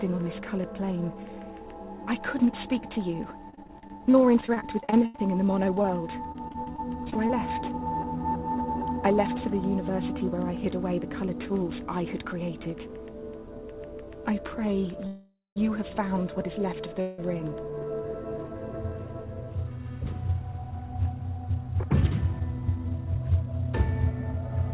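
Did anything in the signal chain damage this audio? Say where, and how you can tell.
Yes, and it all happened on the network and jitter-buffer side of a narrowband call path. The band stops at 4 kHz, which fits G.711 at 64 kbps.

Between 3.5 and 7.31 s there's repeated packet loss, and it gives that robotic, choppy sound. The receiver keeps hitting holes, 29 of them, the longest about 80 ms. Each one gets patched by stretching the last bit of audio, and the next hole arrives before it recovers. About 17% of that stretch is concealment, and roughly half a second of real audio is simply gone.

Two call audio freezes follow, at 15.07 to 15.58 s and at 17.01 to 17.2 s. In each, the sound hangs and decays into a fading buzz or hiss. The first one lasts about half a second and ends in roughly 180 ms of silence. The second is shorter, about 0.17 s. Then the audio picks up right where it stopped, so nothing is lost, just delay inserted. 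The likely cause is delayed packets draining the jitter buffer.

From 21.89 to 23.35 s there's a jitter buffer speed-up. The audio runs at about 109% speed with the pitch unchanged, so it sounds a bit rushed. The buffer was holding more than it aims for, as when delayed packets arrive together, and it trimmed pitch-period-sized slices over and over, around 150 ms in total, to get back to its target delay.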